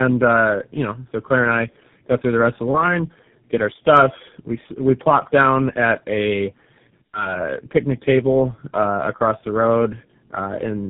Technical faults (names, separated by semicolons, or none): tandem speech coding